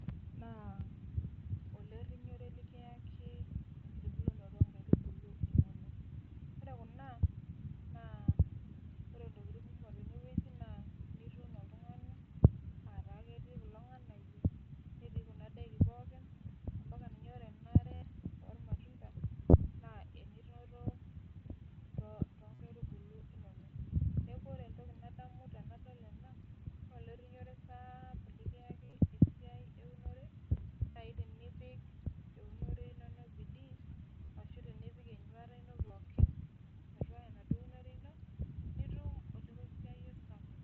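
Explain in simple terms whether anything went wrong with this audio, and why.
Something did go wrong: the speech has short dropouts from concealed Bluetooth headset packet loss. Bits of audio between headset and phone went missing, and the phone filled each gap by repeating a recent slice of sound. That gives a brief buzzy, held tone with a little wobble as the real speech comes back. It happens at 17.94 s (75 ms), 19.50, 22.54, 28.85 (scattered over about 75 ms), 30.90, 34.25 and 35.88 s. The headset's mSBC codec adds only its light graininess.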